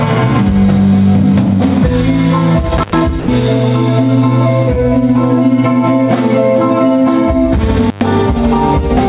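At 2.77 to 2.99 s comes an intermittent contact: a loose plug or cable connection breaks for about 99 ms, so the sound cuts out with a crackle at the moment the contact opens and again as it closes, leaving only faint hiss in the gap. The crackly edges set it apart from a clean digital dropout.

At 3.20 to 3.28 s the sound gives way for 80 ms to steady, even noise. This was likely sound dropped by the voice detector: the sender judged that stretch to be background and stopped transmitting, and the receiver filled the hole with comfort noise. Unlike the contact fault, the fill is a flat noise bed rather than hiss between crackles.

At 7.86 to 8.01 s the intermittent contact recurs, opening for about 110 ms with the same crackle at both edges. Throughout, the band-limited call path leaves nothing above 4 kHz, which fits G.711 mu-law at 64 kbps.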